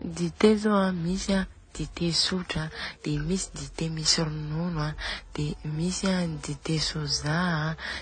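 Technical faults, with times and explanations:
Throughout, transcoding between lossy codecs: muffled speech with nothing above 9 kHz and mixed swirly, smeared artefacts, likely from successive low-bitrate codecs, each compounding the earlier damage.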